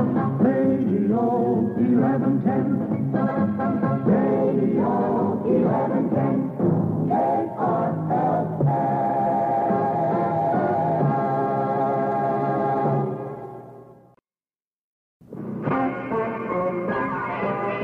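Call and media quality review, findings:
Nothing stood out on listening, so there are no findings to log for this clip.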